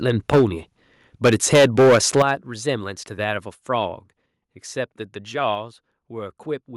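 From 0.09 to 0.44 s the speech peaks are flattened, with a harsh crackle. This is microphone overload, likely from input gain set about 9 dB too hot. Around a tenth of samples are clipped. At 0.34 s the level drops about 2 dB in one step. From 1.25 to 2.22 s the overload returns harder, about 10 dB over, clipping roughly 15 percent of samples. At 2.22 s the whole signal falls about 10 dB at once. At 5.55 s it drops about 3 dB more. These are the microphone volume stepped down, likely with the input turned down after the distortion.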